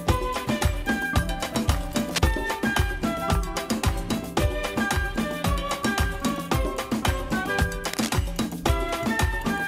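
Two bursts of cable scratch noise break into the audio, from 1.89 to 2.52 s and again from 7.86 to 8.11 s, each a dense, uneven scratching and rustling sitting roughly 10 dB below the main sound. The likely cause is a worn cable, connector or control being moved, its contact resistance jumping erratically. On a spectrogram each burst shows as a ragged broadband smear of vertical streaks; the waveform carries a jagged, fuzzy layer of irregular spikes.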